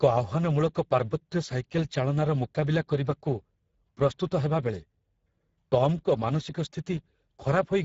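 Throughout, the speech carries plainly audible Speex codec damage: hoarse, noisy CELP excitation rather than swirly transform-codec warble, nothing above 7.6 kHz, which fits a bitrate near 10 kbps.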